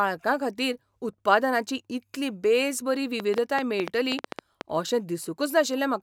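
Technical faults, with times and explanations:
3.2–4.62 s, train of clicks: about ten sharp, similar pops tick over the speech at an uneven pace, near 7.8 per second, peaking roughly 15 dB above it. Repeated pulses like these likely come from electrical interference or a faulty connection or power supply.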